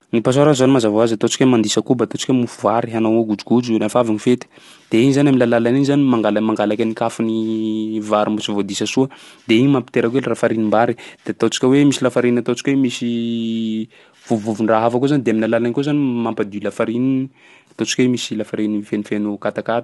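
Throughout, the speech is rough and grainy, with nothing above 11.6 kHz. This is likely low-delay AAC compression, fitting a rate near 32 kbps.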